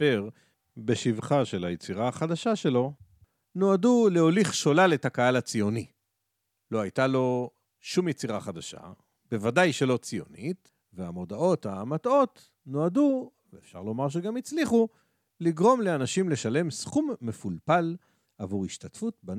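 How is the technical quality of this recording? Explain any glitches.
Nothing glitchy turns up here; the speech comes through steady the whole way, with no technical faults to point out.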